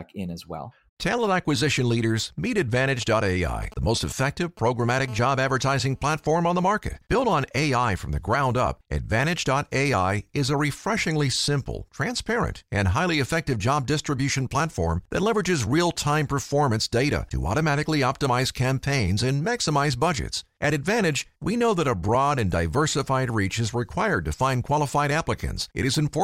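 From 3.01 to 5.06 s, just after "acquisition leaders meet", GSM signalling bursts appear. A nearby 2G phone's radio bursts get rectified, giving galloping dit-dit-dit buzzes at 217 Hz, roughly 20 dB below the speech.

From 5.08 to 6.76 s comes GSM phone buzz. The phone now transmits in bursts 217 times a second during a call. A steady, raspy 217 Hz buzz sits about 30 dB below the speech.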